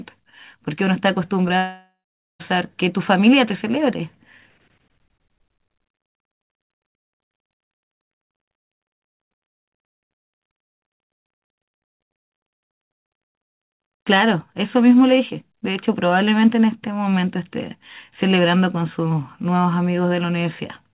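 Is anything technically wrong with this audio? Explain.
Yes, there are two network faults close together in this speech clip.

At 1.48 s there is a short concealed packet loss: about 20 ms of audio arrived too late, and the receiver bridged the gap by extending the preceding sound before blending back. The result is a brief smear or wobble. Unlike a dropout, the speech never stops.

From 1.58 s to 2.41 s there is a long network dropout, likely caused by a stall in packet delivery. The last sound is stretched into a fading buzz or hiss, and then roughly 0.44 s of silence follows before the speech resumes with part of it missing. What separates it from the earlier glitch is that audible gap.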